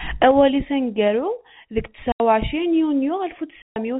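A speech recording over G.711 telephone coding, band-limited below 4 kHz, shows packet loss filled with silence: an 80 ms hard-edged gap at 2.12 to 2.2 s, between "aneggaru deg" and "u ɛcrin", and a 140 ms gap at 3.62 to 3.76 s, which fits runs of lost 20 ms packets replaced by silence.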